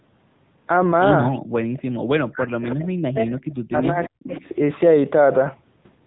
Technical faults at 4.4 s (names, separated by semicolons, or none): AMR narrowband mobile codec; speech suppressed in double talk; echo leak